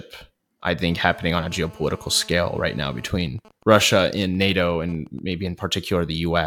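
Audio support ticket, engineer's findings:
GSM phone buzz, 0.92–3.08 s: steady raspy 217 Hz buzz, about 25 dB below speech, rich harmonics. A phone in a call, rectified in the audio input. Unlike mains hum, it is not at 50/60 Hz.

GSM signalling bursts, 3.15–5.19 s: even ticks with a longer 217 Hz buzz twice a second, at a similarly low level. A phone silent in the call, sending only intermittent burst groups rather than continuous buzz.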